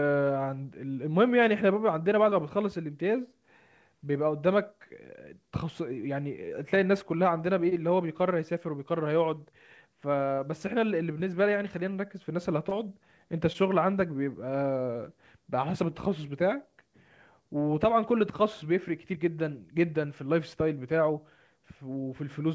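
At 2.30, 7.69, 10.35, 11.18, 12.69 and 13.53 s, a short concealed packet loss occurs. About 20 ms of audio arrived too late, so the receiver extended the preceding sound to fill each gap, heard as a brief smear or wobble in wideband speech with nothing above 8 kHz.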